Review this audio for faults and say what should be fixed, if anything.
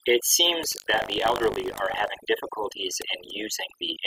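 Overdone noise removal runs through the whole clip. The noise reduction was set too aggressively, so frequency bands near its noise estimate are pulled down or switched off, and the quieter parts of the speech are removed with the noise. The background drops and breaks up into twinkling specks. To prevent it, use a gentler reduction amount and a conservative noise profile, and check the result against the original.

Buffer tearing occurs from 0.70 s to 2.09 s, heard as a robotic buzz at 50 Hz that persists while speech is present. This repetition rate fits a buffer period of about 20 ms. The writer and reader of the ring buffer have drifted until they cross within each period, so a small slice of each buffer, around a twentieth, carries stale audio from roughly 70 ms earlier, with hard joins at both edges. To prevent it, keep writer and reader synchronized with adequate buffer headroom so the write pointer never overtakes the read pointer.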